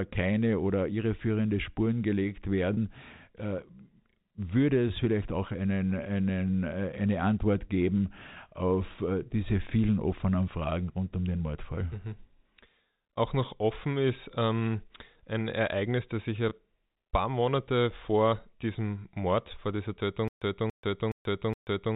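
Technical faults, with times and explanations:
2.74–2.77 s and 16.49–16.51 s, packet loss with pitch repetition: gaps of 30 ms and 20 ms bridged by repeating the last pitch period, heard as a briefly held, buzzy tone.
20.28 s to end, stutter with silent gaps: a 0.28 s burst repeats four times every 0.42 s with 135 ms of digital silence between, likely from a stalled stream retrying.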